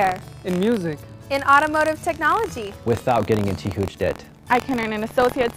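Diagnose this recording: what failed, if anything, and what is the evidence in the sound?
Buffer tearing throughout, at the driver/buffer stage: a 43.1 Hz rattle, fitting a 1024-sample buffer, as each period replays a slice of audio about 50 ms old.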